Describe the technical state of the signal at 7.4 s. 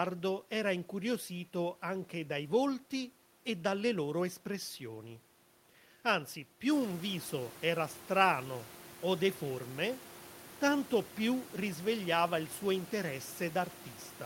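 At 7.4 s the signal is intact, with no fault present; the room noise heard there belongs to the recording space and sits about 20 dB below the speech.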